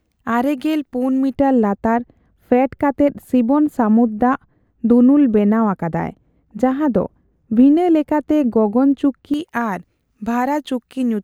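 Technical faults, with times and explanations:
1.34 to 9.34 s, de-emphasis applied wrongly: the speech turns dull and muffled, its sibilance and crispness sinking away, because a treble-cutting de-emphasis filter was applied where no pre-emphasis existed or was applied a second time, rolling the highs off smoothly to about 11 dB down at 10 kHz relative to 1 kHz.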